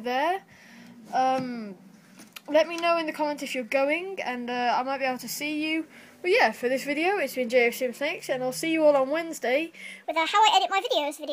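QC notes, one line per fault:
10.05 to 11.33 s, section at the wrong speed: the last stretch runs 1.38 times fast, pitch up about five semitones, likely from being played against the wrong clock.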